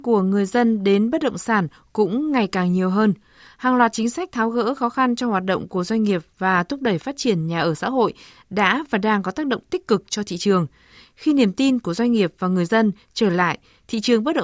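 Nothing goes wrong anywhere in this bit of speech, so there's no technical fault to walk through.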